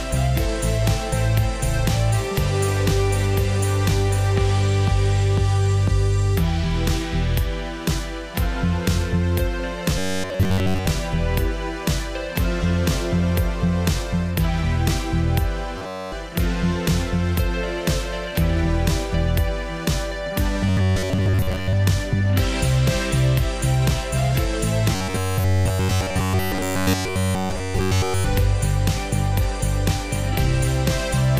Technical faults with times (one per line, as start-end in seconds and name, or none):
9.98-10.87 robotic sound from repeated short buffers
15.78-16.14 robotic sound from repeated short buffers
20.67-21.73 robotic sound from repeated short buffers
24.95-28.25 robotic sound from repeated short buffers